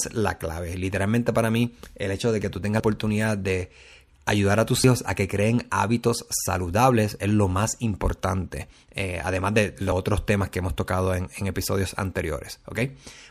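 Speech that skips ahead twice, at 2.8 s after "hecho de que tú" (about a tenth of a second gone) and 4.84 s after "a tus" (roughly 70 ms), likely a dropped buffer (overrun).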